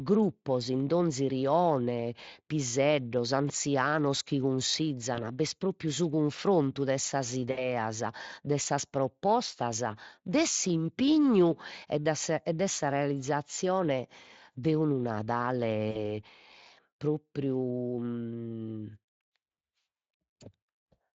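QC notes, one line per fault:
5.15–5.23 s, 7.51–7.68 s and 15.91–16.00 s, VoIP packet loss concealed by the speech codec: at each point the speech smears into a brief buzzy tone or coloured noise that fades, and then sounds thin or distorted for a moment before recovering. The gaps fit about 20, 60 and 40 ms of missing audio. The decoder filled each one by extending its last pitch and filter at falling gain, and later frames built on that guess, so the damage lingered under the light Speex coding.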